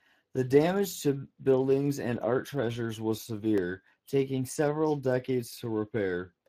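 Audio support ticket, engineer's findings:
Speex codec throughout. Low-bit CELP encoding starves the excitation signal, leaving speech plainly coarse, noisy and hoarse across the whole clip. Damage level fits a Speex stream near 22 kbps. Nothing above 15.4 kHz. Probable component: the VoIP or chat encoder in the capture path.

Block of digital silence at 3.58 s. Output buffer likely not filled in time, so one block went out as zeros. Sound drops out for about 3 ms and returns with no fade, heard as a single tick at the hard edges. Gap length fits a 128-sample buffer. Probable component: audio output callback.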